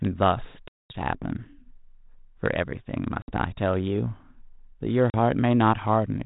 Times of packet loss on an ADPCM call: 0.68-0.96, 3.22-3.38, 5.10-5.15

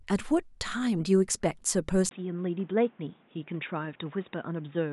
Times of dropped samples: none

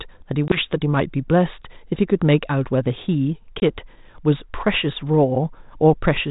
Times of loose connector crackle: none

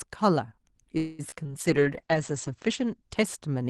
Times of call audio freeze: 0.97-1.21

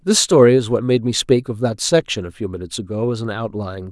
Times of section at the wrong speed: none

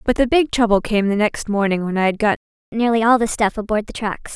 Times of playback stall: 2.36-2.72

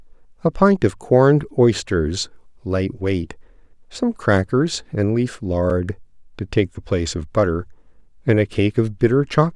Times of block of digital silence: 5.70

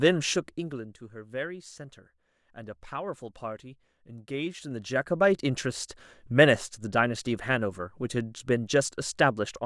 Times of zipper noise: 0.30-1.04, 4.28-5.36

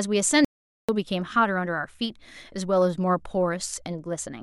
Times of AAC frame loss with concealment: none

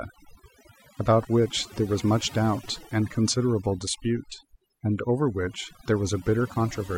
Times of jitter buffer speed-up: none

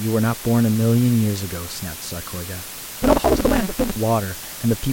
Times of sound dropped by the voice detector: none

